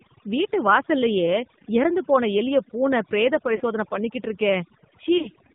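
Across the whole speech recording, overdone noise removal has pushed individual frequency bands down or out wherever they came close to the tool's noise estimate, taking quiet parts of the voice with them. The background sits near silence but sparkles with isolated twinkling specks. The specks are what separate this from a plain noise gate, which would open and close on the whole signal rather than flicker band by band.

The AMR narrowband mobile codec is also present throughout, and its damage is plainly audible. Nothing above 4 kHz gets through, and the voice comes out buzzy and synthetic. Both point to a low AMR-NB mode, around 7.4 kbps, rebuilding speech from a vocal tract model driven by sparse pulses. The buzz is the cue that marks it apart from simple low-pass filtering, which would dull the sound without making it artificial.

Lost AMR speech frames occur at 3.56 to 3.62 s, between "போன எலிய பூனை பிரேத" and "பண்ணிக்கிட்டு இருக்கே". 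About 40 ms is missing, consistent with two frames, and the decoder stretches the last good sound with falling gain instead of cutting to silence. A second cluster falls between 5.18 and 5.36 s, with roughly 80 ms lost in short runs spread across 160 ms. It gives repeated small warbles and dips.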